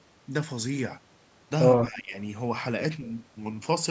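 From 1.84 to 2.14 s, an echo canceller likely mistook overlapping talk for echo, causing speech suppressed in double talk: the speech dips by roughly 15 dB.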